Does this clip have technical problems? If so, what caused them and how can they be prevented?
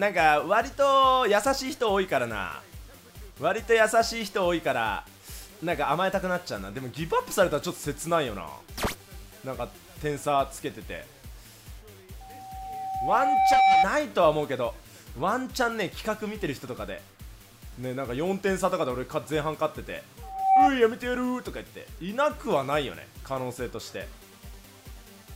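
Yes. Loudspeaker feedback squeal swells up at 12.20–13.87 s and again at 20.22–20.70 s as a 770 Hz tone, roughly 10 dB above the sound. The microphone picks up its own loudspeaker, and at 770 Hz the loop's gain exceeds one. Keep microphones out of the loudspeaker's coverage, lower the gain, or notch out 770 Hz.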